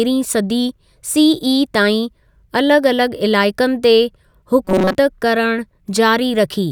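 From 4.65 s to 4.95 s the speech collapses into robotic sound from repeated short buffers: a rigid, metallic buzz at 188 Hz that loosely tracks the speech contour. The likely cause is audio arriving too slowly, with playback looping a tiny fragment, here about 5.3 ms long, to cover the gaps. For most of that stretch the looped fragment stands in for the real signal, which is skipped.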